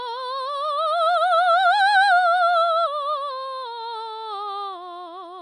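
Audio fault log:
Throughout: MP3 compression. The music has nothing above 10.6 kHz and a plainly audible watery swirl, with chirping highs and softened attacks, likely from a low-bitrate MP3 encode near 40 kbps starving weak frequency lines, unlike a plain low-pass filter, which dulls without swirling.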